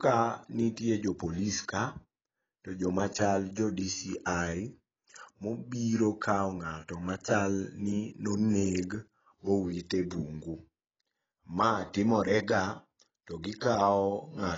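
From start to finish, the speech was likely squeezed through AAC compression at a low bitrate, which fits a rate near 18 kbps. The encoder discarded everything above 7.6 kHz and quantised what remained coarsely, so the sound is dull, muffled and heavily smeared.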